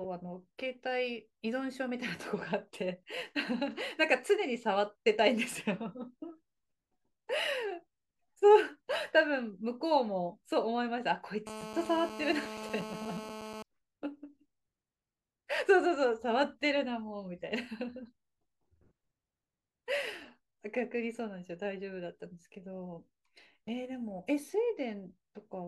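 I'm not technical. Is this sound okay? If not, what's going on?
No. GSM phone buzz from 11.47 to 13.63 s: a mobile phone on a call nearby sent radio pulses 217 times a second, and the recording equipment picked them up, causing a harsh, raspy buzz over the speech.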